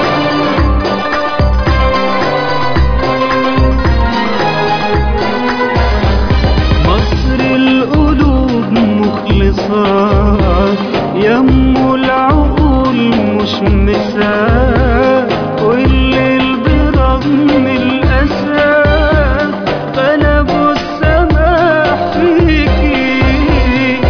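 No technical faults are audible in this audio.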